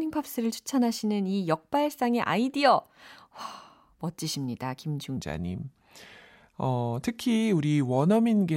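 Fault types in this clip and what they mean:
Section at the wrong speed: from 5.17 s the speech slows to 0.83 times and sinks about three semitones together, unlike steady-tempo pitch shifting; likely a clock mismatch.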